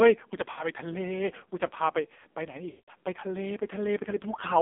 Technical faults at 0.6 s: AMR narrowband mobile codec; lost AMR speech frames

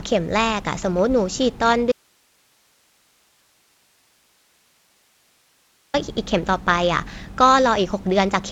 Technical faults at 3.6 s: audio dropout to a faint residue

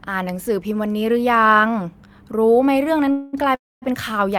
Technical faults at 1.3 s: none

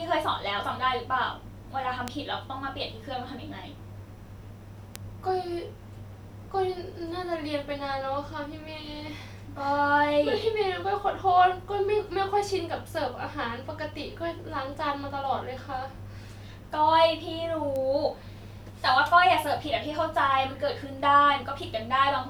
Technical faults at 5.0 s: bit error spike

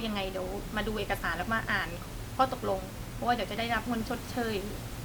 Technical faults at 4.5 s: none

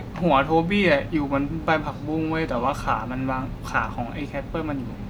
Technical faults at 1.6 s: none

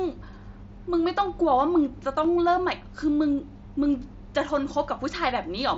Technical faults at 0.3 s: none

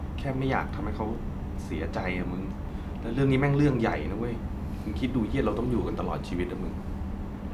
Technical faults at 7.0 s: none

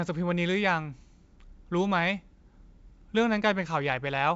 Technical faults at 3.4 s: none

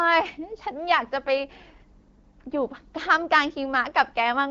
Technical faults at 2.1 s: none

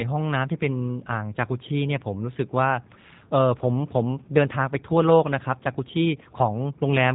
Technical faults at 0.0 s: G.729 codec

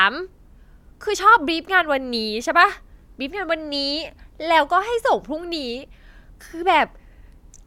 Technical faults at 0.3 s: none

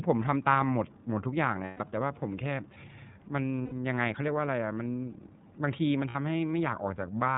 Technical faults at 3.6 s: iLBC codec; lost iLBC frames

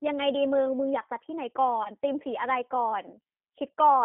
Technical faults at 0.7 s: G.729 codec

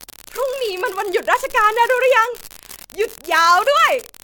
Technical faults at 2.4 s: unreliable data bit; generation loss

